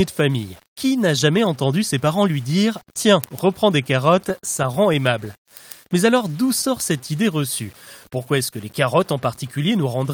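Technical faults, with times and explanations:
Throughout, low bit depth without dither: a gritty, grainy roughness clings to the speech and shifts with it, sitting about 30 dB below the signal. It is coarsest in the softest passages. The likely cause is rounding to around 7 bits with no dither. With so few levels, each step's error follows the waveform, so the distortion moves with the speech instead of forming a steady hiss.
4.29 to 5.49 s, repeated stalls (stutter): the speech catches and drags in eight short hitches, the longest 48 ms, together about 111 ms, or 9% of that stretch. Nothing is lost, but the flow halts and restarts unevenly. Packets arrived late or too slowly, so the jitter buffer kept running dry. Each time the receiver stretched out the last sound until fresh audio arrived, which produces the halting drag.
9.12 to 9.72 s, jitter buffer speed-up: the speech briefly sounds hurried, running at about 105% speed while the pitch stays the same. 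The jitter buffer had built up more audio than it wanted and trimmed the excess delay by cutting out many tiny pitch-period slices, about 40 ms in all. Because whole cycles were removed rather than the playback rate changed, the pace quickens but the pitch does not rise.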